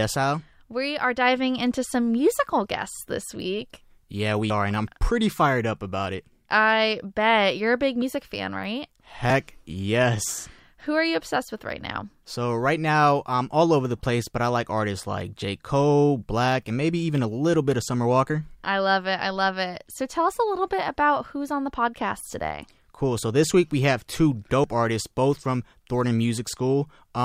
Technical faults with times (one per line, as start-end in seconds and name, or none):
4.50 dropped buffer (overrun)
8.02 dropped buffer (overrun)
24.64 dropped buffer (overrun)